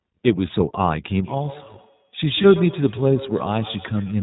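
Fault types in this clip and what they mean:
iLBC codec: everything above 4 kHz is missing throughout, and the speech sounds plainly rough and synthetic, unlike a clean low-pass filter, which would only sound dull.
lost iLBC frames: from 2.42 to 2.46 s a short buzzy held vowel fills the gap, pointing to one lost 20 ms frame, and the speech recovers immediately rather than smearing.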